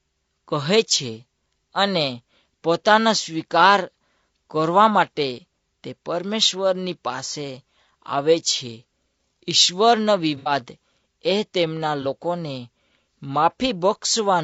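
Throughout, the speech sounds rough and grainy, with noise between the harmonics and a thin top band, likely from low-delay AAC compression at a bitrate around 32 kbps. From 10.37 to 10.51 s, and again from 12.02 to 12.06 s, smeared, noisy patches mark AAC frame loss with concealment. The decoder covered about 90 ms, then about 30 ms, by rebuilding from the last good spectrum.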